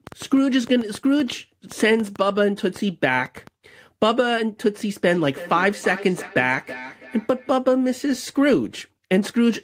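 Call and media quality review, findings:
Train of clicks, 0.07–3.48 s: roughly fifteen similar pops at about 4.4 per second, irregular pace, peaking around 5 dB above the speech; likely external interference or a struggling interface.

Feedback echo between two devices, 5.06–7.55 s: speech returns roughly every 300 ms, thinner each pass, up to about 15 dB below the speech. Second device's playback re-captured by a microphone whose echo canceller can't remove it.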